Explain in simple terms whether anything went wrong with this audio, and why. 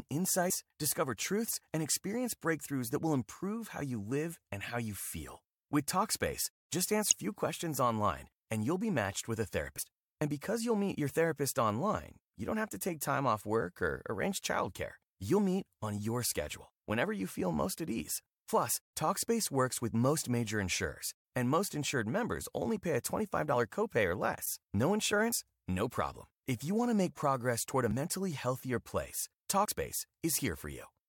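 Five times the speech jumps ahead with compressed frames skipped: at 7.11–7.13 s, 9.78 s, 25.29–25.35 s, 27.91 s and 29.63–29.69 s. Short stretches of speech, roughly 50 to 150 ms each, are missing. Unlike a dropout, there's no silent gap.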